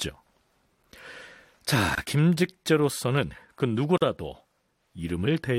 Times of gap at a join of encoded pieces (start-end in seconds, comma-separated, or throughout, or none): 1.95-1.98, 3.98-4.02